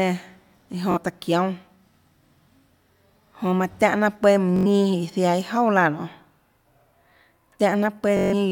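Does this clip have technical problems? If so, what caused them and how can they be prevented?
Yes, there is Bluetooth stutter in three places: 0.92 to 0.98 s, 4.56 to 4.67 s, and 8.17 to 8.34 s. In each, packets from the wireless link arrived late or not at all, and the receiver repeated its last short slice of speech, roughly 21 ms long. The result is a buzzy repetition lasting about 43, 85 and 149 ms, worsening each time. Afterwards the speech jumps ahead rather than continuing from where it stopped. To prevent it, record over a wired connection, or keep the Bluetooth devices close together and away from 2.4 GHz interference.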